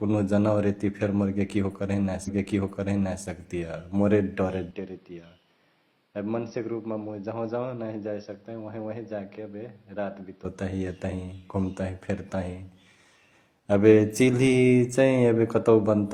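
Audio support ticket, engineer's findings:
Stream segment repeated, 2.23 to 3.22 s: about 0.98 s of speech plays a second time, with a small blip at the jump back. Player fetched or queued the same segment twice. Unlike an echo or loop artefact, it is one identical, full-level repeat with no decay.

Input switched to a poorer device, 4.71 to 10.45 s: speech abruptly turns dull, with nothing above 5.8 kHz, a drop of around 10 dB, and a new noise floor roughly 35 dB under the signal. No gap at the switch. Likely a change of capture device. Unlike an EQ or low-pass fault, level and background noise shift together, then clear at 10.45 s.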